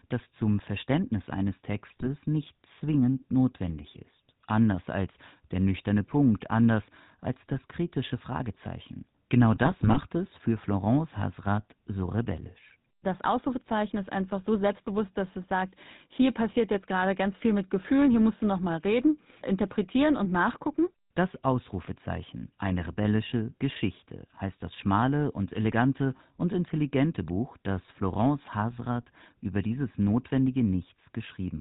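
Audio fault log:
throughout GSM full-rate codec: buzzy, gravelly roughness with nothing above 4 kHz, from a pulse-driven vocal-tract model whose coarse excitation fits a 13 kbps full-rate coder.
1.88–2.07 s, 9.52–9.99 s GSM bit errors: squawks and gargling bursts just before "nicht zwingend notwendig ist" and "es für", as corrupted filter, pitch and gain values warp whole frames.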